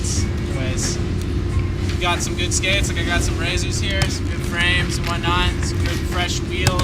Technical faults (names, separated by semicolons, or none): none